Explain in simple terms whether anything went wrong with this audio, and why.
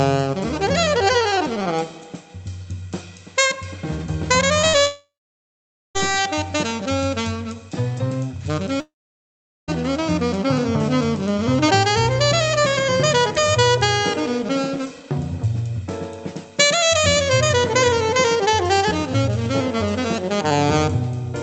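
Short concealed packet loss at 4.61 and 4.69 s: tiny pieces of the call arrived too late, so the receiver patched them with continued sound, leaving brief smears.

Long network dropout at 4.87 to 5.97 s and 8.81 to 9.70 s: the sound fades into just under a second of silence, then resumes with that stretch missing, likely from audio that never arrived over the network.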